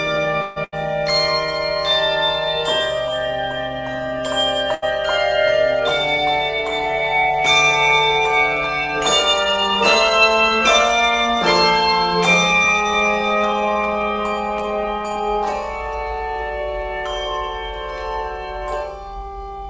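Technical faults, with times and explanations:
0.42 to 0.58 s, call audio freeze: the sound stalls for about 140 ms and the last moment is stretched into a fading buzz or hiss, likely because packets were held up and the jitter buffer ran dry. Playback then picks up exactly where it stopped, so nothing is lost, only delayed.
0.64 to 0.74 s and 4.74 to 4.84 s, burst of packet loss: each time roughly 80 ms of audio is dropped, with the receiver holding the last sound as a decaying buzz or hiss across the gap, then jumping ahead so that stretch is missing.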